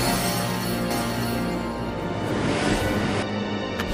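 From 0.91 s to 3.23 s a doubled audio track appears: a dry copy roughly 0.7 s late and about 5 dB quieter, likely from a second, slower capture path.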